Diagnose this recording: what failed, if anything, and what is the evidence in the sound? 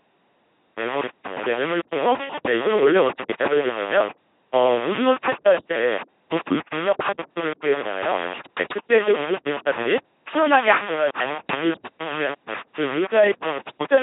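Sample-format conversion, likely undithered requantisation: grainy distortion tracks the speech throughout, with noise only about 15 dB below it. This fits 4-bit rounding. Unlike dithered noise, it is not steady and independent.

Codec: throughout, the speech becomes a buzzing, mechanical robot voice with heavy damage and nothing above 3.8 kHz. Pulse-or-noise excitation fits LPC-10 at 2.4 kbit/s, not simple band-limiting.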